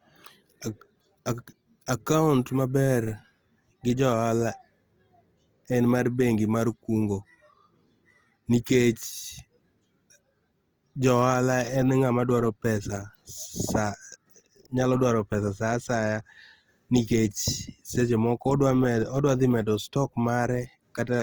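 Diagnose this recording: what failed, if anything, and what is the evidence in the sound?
The codec stage is the likely culprit: the speech carries plainly audible Opus compression from start to finish, consistent with the music-oriented CELT mode at a low rate, which fits roughly 24 kbps. With too few bits, the encoder preserves each band's energy but refills its detail by folding lower bands or inserting noise. Voiced sounds therefore come out grainy and rough rather than swirling. The bandwidth stays full, with content extending to about 20.2 kHz.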